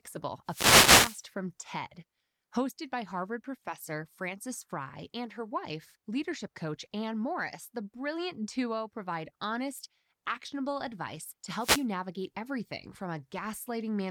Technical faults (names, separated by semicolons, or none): wireless microphone noise hit